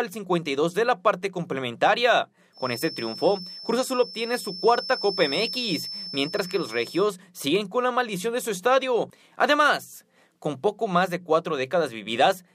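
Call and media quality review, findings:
Feedback whistle, 2.51 to 7.13 s: steady 5.3 kHz tone about 15 dB under the signal, level swelling and fading slowly. Likely loudspeaker-to-mic loop held at the edge of oscillation. Never builds like runaway howl; too high and unsteady for mains hum.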